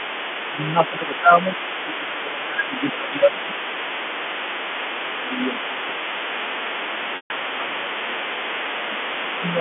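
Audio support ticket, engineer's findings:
Mains hum: steady low 60 Hz tone under the whole clip, sitting about 25 dB below the speech level. It does not follow the talker and stays put through pauses. Probable component: near-end analogue path, a ground loop or a transformer coupling the power line into the mic or line input. It sits inside the 250 Hz to 3.4 kHz telephone band only as harmonics; the fundamental itself is below the line band's lower edge.

Other side's voice leaking through: a second voice runs underneath the talker for the full clip, roughly 10 dB below the main speech. Likely cause: the far end's audio plays from the talker's loudspeaker and re-enters the microphone, with the echo canceller leaving a residual it failed to subtract. Probable component is the AEC on the talker's device.

Speech suppressed in double talk: the talker's level dips and thins while the leaking voice is active. 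At 0.48 to 3.53 s the drop reaches about 10 dB, affecting around 2 s in total. At 5.23 to 6.54 s it is shallower at about 5 dB. At 6.9 to 7.89 s it is about 10 dB again. A brief dip of about 5 dB comes at 9.08 to 9.43 s. Likely cause: the echo canceller cannot separate near speech from loudspeaker echo and attenuates both.

Packet loss with pitch repetition: at 7.16 to 7.30 s a 140 ms gap is bridged by a held, buzzy repeat of the last pitch cycle. It fades toward silence before speech cross-fades back in. The gap falls inside the third suppression dip. Mechanism: receiver-side concealment of lost packets. The length fits fourteen 10 ms packets dropped in a row. Probable component is the network path or jitter buffer.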